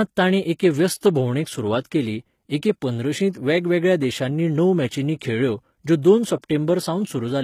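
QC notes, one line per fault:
Throughout, HE-AAC compression: plainly audible gritty, metallic or lispy s sounds, likely from HE-AAC copying lower bands upward as treble, consistent with roughly 20 kbps.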